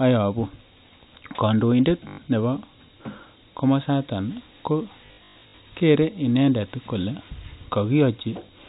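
At 2.08 s the audio stutters for about 100 ms: packet loss with last packet repeated, the receiver looping its last chunk, which fits 20 ms packets, so there's a 50 Hz buzz. It returns worse from 5.06 to 5.58 s, between "komosata ko" and "kere inendet kole", in scattered robotic bursts.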